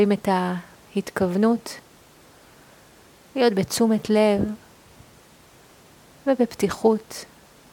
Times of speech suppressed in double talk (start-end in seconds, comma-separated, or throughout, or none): none